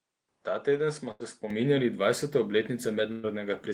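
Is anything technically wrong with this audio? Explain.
Yes, there are two kinds of fault in this speech. From 0.0 to 1.50 s the input likely switched to a poorer device. The sound is duller, with nothing above 10.5 kHz, about 5 dB quieter, and carries fresh background noise. A spectrogram shows a flat ceiling there, and the waveform is visibly smaller.

A burst of packet loss hits at 1.11 to 1.23 s and again at 3.12 to 3.26 s. The receiver stretched and faded the last sound across each gap, about 80 ms and 120 ms missing. The spectrogram shows smeared, decaying bands, and the waveform shows tapering envelopes.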